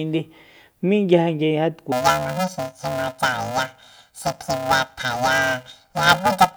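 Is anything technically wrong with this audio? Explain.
Yes. From 1.92 s to the end at 6.56 s, the speech is affected by planar audio read as interleaved. Each short block, 2.67 ms long and consistent with 128 samples, holds all of one channel and then all of the other, but it is read as alternating pairs. Every block therefore plays twice at double speed. Because the blocks are so short, there is no clear octave jump. Instead the voice takes on a robotic buzz at the 375 Hz block rate. A spectrogram would show a steady 375 Hz comb of harmonics, and the waveform would show periodic discontinuities every 2.67 ms.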